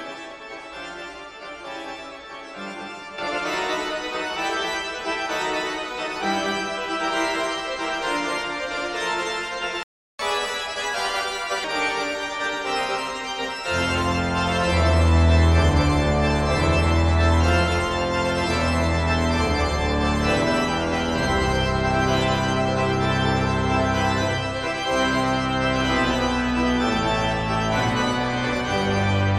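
A digital gain change applied with no ramp is the likely cause of the first fault, a sudden gain jump at 3.18 s. From one sample to the next, the sound and its background noise step up together by about 10 dB, and they stay at that higher level to the end of the clip instead of easing back down. A playback stall follows, most likely because the player ran out of buffered data or its output thread was blocked. At 9.83 s the sound cuts off in mid-flow, and the output stays completely silent for about 0.36 s before audio resumes at 10.19 s, picking up where it stopped. The player then tries to recover the delay by resampling its backlog, which produces catch-up at higher speed from 10.19 s to 11.64 s. For that stretch of roughly 1.45 s, everything runs at 1.25 times normal speed, so the sound is audibly hurried and sits about four semitones sharp. Once the lost time has been won back, speed and pitch drop back to their normal values.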